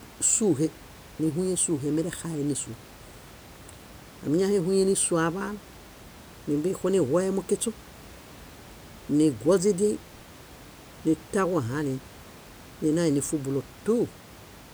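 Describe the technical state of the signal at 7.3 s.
At 7.3 s the speech signal is intact, with only the room's own background noise sitting about 22 dB below the speech.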